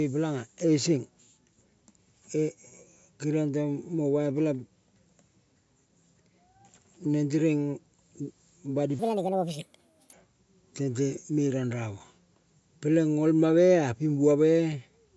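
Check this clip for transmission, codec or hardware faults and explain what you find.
There's one fault, a wrong sample rate, from 8.99 to 10.13 s. That stretch plays 1.5 times too fast with no conversion, which fits 16 kHz audio being played out at 24 kHz. Speed and pitch rise together, so the speech jumps about 7 semitones higher and sounds squeaky and rushed.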